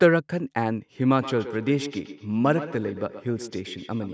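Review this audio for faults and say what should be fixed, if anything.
Feedback echo between two devices runs from 1.21 s to the end at 4.14 s. The speech returns roughly every 150 ms, thin and ringing, and peaks at about 13 dB below the direct sound. A second device replays the call into this microphone, which the echo canceller cannot remove. Keep only one active call device per room.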